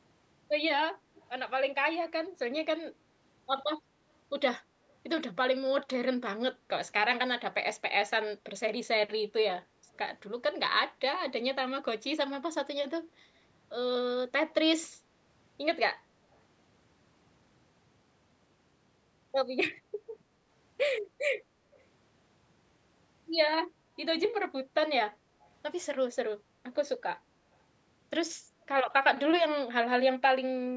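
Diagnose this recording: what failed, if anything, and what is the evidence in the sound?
Faint echo leak in the call processing stage shows up as brief repeats of the speech at 1.15 to 1.29 s, 4.89 to 4.94 s, 16.33 to 16.38 s and 21.71 to 21.84 s, each trailing the original by 226 ms and sitting roughly 30 to 40 dB below it. The likely cause is a far-end echo canceller that let a loudspeaker pickup through. On a spectrogram, look for weak, smeared copies of the speech harmonics offset 226 ms to the right, inside the band that ends at 8 kHz. On the waveform, they appear as low-level ripples just after a syllable.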